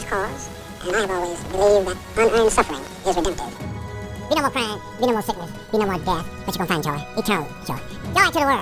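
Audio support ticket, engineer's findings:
Wrong sample rate, whole clip. Everything runs twice as fast and sits a full octave high, about 12 semitones up. Playback path skipping conversion. Fits 16 kHz material pushed out at 32 kHz. Worth checking the output rate setting, I reckon.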